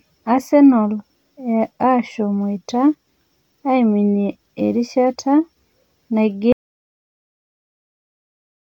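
At 6.52 s the speech cuts out in an audio dropout to silence. Silence, with no room tone, runs to the end. The input was likely lost.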